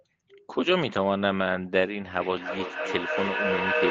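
From 2.17 s on, there is feedback echo between two devices. A nearby device replays the call into the microphone. Repeats arrive roughly every 0.3 s, as loud as the speech.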